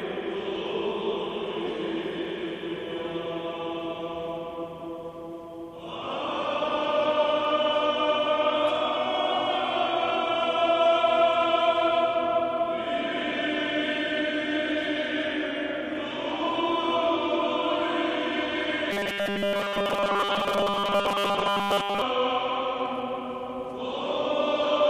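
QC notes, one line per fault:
18.91–22.02 s, robotic sound from repeated short buffers: a rigid, metallic 200 Hz buzz over most of this stretch, likely a 5 ms buffer looped while incoming audio stalled.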